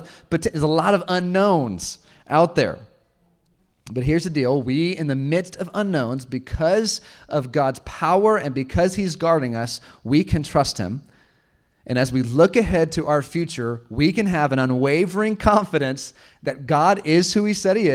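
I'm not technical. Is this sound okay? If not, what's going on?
No. Lost packet rebuilt from error correction at 1.19, 9.53 and 13.41 s: each time, a brief 20 ms piece of speech went missing and was filled from a rougher backup copy, sounding briefly grainy.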